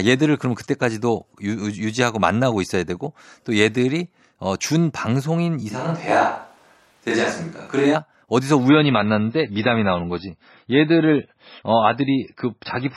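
From 5.72 to 7.94 s, the close microphone's feed likely dropped out in favour of a distant microphone, so the speech turns abruptly roomy and hollow, with thinner bass but an unchanged level. Faint room noise sits far below it.

From 8.69 s to the end at 12.97 s, an adaptive stream switches to a lower bitrate, which fits a drop to roughly 17 kbit/s. The speech loses everything above 5.6 kHz and gains swirly codec artefacts, with no gap.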